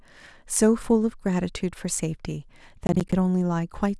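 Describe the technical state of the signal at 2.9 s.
At 2.9 s the signal is inside a burst of processor overload crackle running from about 2.87 s to 3.13 s. The processor is failing to fill its small audio buffers on time, and several deadlines in a row are missed. Each miss drops in a short stretch of silence, around 10 ms long, with hard edges. Strung together across the quarter second, these gaps tear up the speech into a gritty crackle that ends when the load eases at 3.13 s.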